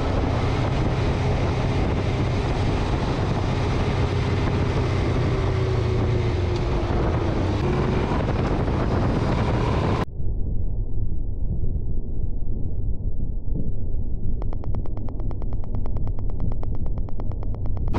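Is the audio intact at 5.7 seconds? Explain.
Yes, the audio is intact at 5.7 seconds, with no dropout, glitch or other fault at that moment.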